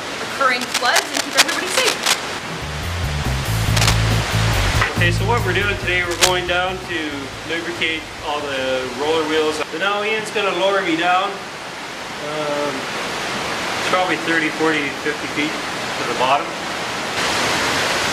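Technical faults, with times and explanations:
0.61–2.19 s, 3.76–3.99 s and 6.11–6.32 s, cable scratch noise: dense, ragged bursts of scratching and rustling sit on the sound, about as loud as the sound itself and louder in the last burst. This is likely a worn cable or connector being moved, its contact resistance jumping erratically.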